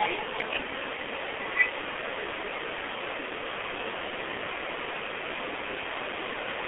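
Throughout the speech, heavy G.723.1 codec damage is audible. The band runs only from 250 Hz to 3.5 kHz, so it sounds muffled and thin. The voice model updates slowly, in 30 ms frames. Consonants blur. The hoarse grain fits a rate near 6 kbit/s.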